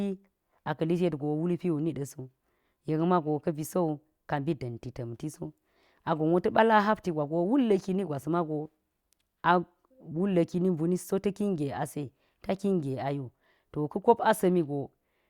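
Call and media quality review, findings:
No faults found in this speech recording.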